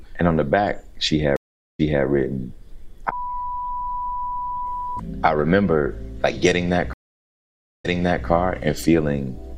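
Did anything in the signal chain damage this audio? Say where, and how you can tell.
Yes. The sound cuts to silence at 1.36 s for 428 ms and resumes 256 ms earlier, then at 6.93 s for 911 ms, jumping back 427 ms. This is a network stream reconnect: the connection broke, the player restarted its decoder, and the server resent recent audio.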